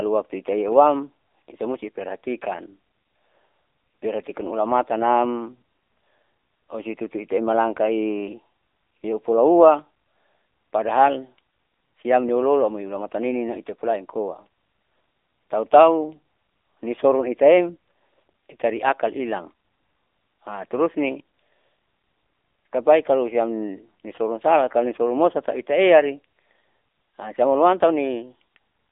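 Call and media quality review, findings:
AMR narrowband mobile codec, whole clip. Speech sits in a phone-line band, roughly 250 Hz to 3.7 kHz, nothing above. Plainly audible buzzy, synthetic edge on the voice. Probable component: AMR-NB encoder in the call path, 8 kHz sampling, low mode. Damage level fits the 7.95 kbps mode. Mechanism: vocal-tract model plus a few pulses per subframe, too few bits to carry the real excitation, so the voice comes out coarse.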